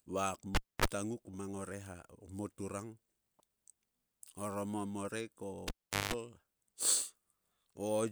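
At 0.55–0.85 s and 5.68–6.14 s, a cable is pulled and plugged in: a pop, about 0.26 s then 0.41 s of near-silence, 50 Hz buzz (0.03 s, then 0.18 s) as the tip touches, and a second pop. On the waveform, spikes frame flat gaps. The spectrogram shows vertical lines and 50 Hz harmonic bands.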